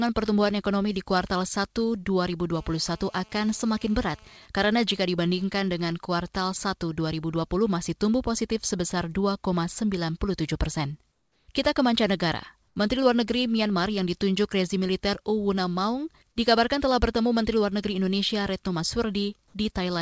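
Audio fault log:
2.55–4.38 s, GSM phone buzz: a hard, raspy buzz at about 217 Hz, thick with harmonics, holds steady for nearly two seconds at about 29 dB below the speech and bears no relation to it. A 2G handset in a call close by is transmitting in bursts 217 times a second, and the audio circuitry rectifies each radio pulse, so the burst rate itself comes through as this tone and its overtones.
4.42–6.52 s, GSM signalling bursts: the buzz gives way to even ticks with a longer 217 Hz buzz twice a second, at roughly 30 dB below the speech. The same handset is still in its call, but with its user silent it sends only short groups of radio bursts rather than a continuous stream. The audio circuit rectifies each group into a brief tick or buzz, which gives the broken, rhythmic pattern.
11.12–11.48 s and 12.68–12.76 s, comfort noise in place of the background: in the pauses the room sound turns into a smooth, featureless hiss with none of its earlier detail. 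It drops by about 4 dB over the first 360 ms and by about 6 dB over the shorter 80 ms gap, then the real background returns with the speech. The likely cause is discontinuous transmission: the sender stopped sending audio once its voice detector found no speech, and the receiver filled the gap with synthetic noise roughly matched to the background. The band stops at 8 kHz, which fits the G.722 codec of the call path.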